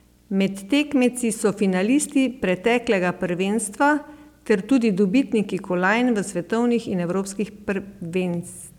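From start to finish a video or display buzz sits under the speech, a steady 60 Hz buzz with hash riding above it. A screen or its video cabling is coupling interference into the audio path, so the buzz follows the picture's 60 Hz field rate rather than anything in the recording. It sits roughly 35 dB below the speech.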